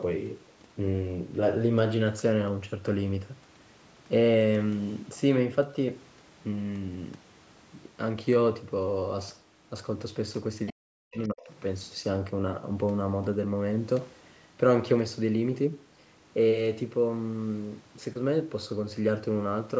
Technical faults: other side's voice leaking through; speech suppressed in double talk

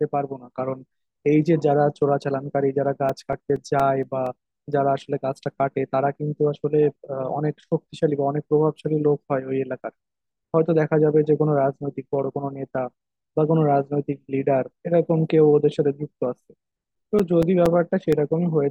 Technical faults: CD scratch ticks

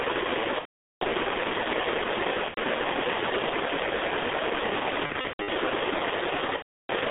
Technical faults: G.723.1 codec; VoIP packet loss concealed by the speech codec

